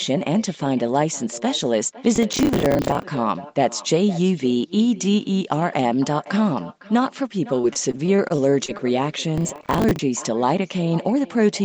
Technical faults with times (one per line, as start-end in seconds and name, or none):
0.00-11.64 echo with no canceller
2.16-3.03 processor overload crackle
7.61-8.81 repeated packet loss (robotic sound)
9.38-9.99 processor overload crackle
10.83-11.16 jitter buffer speed-up